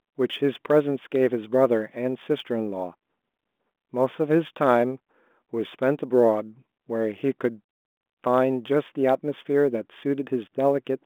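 A fine, grainy roughness rides on the speech from start to finish, thickening on louder and brighter passages and dropping away in the pauses, beneath the narrow telephone band of the G.726 coding, which carries nothing above about 3.8 kHz. This is sample clock jitter: the converter's timing wanders by a few microseconds, so each sample lands slightly off time. Steep parts of the waveform turn that error into noise roughly 40 dB below the signal.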